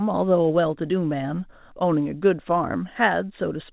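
Nothing goes wrong anywhere in this bit of speech, which comes over a call connection with nothing above 4 kHz, just what you'd expect from a narrowband codec like G.711 mu-law.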